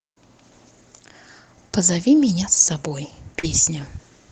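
Short concealed packet loss hits this speech clip at 3.39 to 3.45 s: about 40 ms of audio failed to arrive in time, and the receiver papered over it by extending the preceding sound, leaving a brief smear or wobble. The call path's codec trims everything above roughly 8 kHz.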